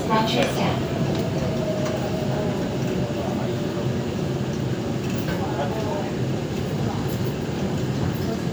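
No technical faults can be heard anywhere in the audio.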